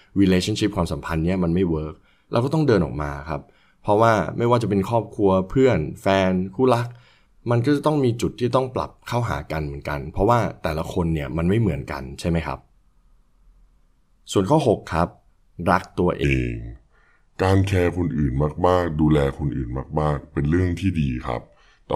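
From 16.24 s to the end at 21.96 s, the speech plays as a section at the wrong speed: it runs at 0.815 times its original rate, so pitch and tempo drop together, by roughly four semitones. The voice turns deeper and more drawn-out from that point on, with the change arriving abruptly rather than gradually. The likely cause is that this portion was rendered or resampled against a mismatched clock.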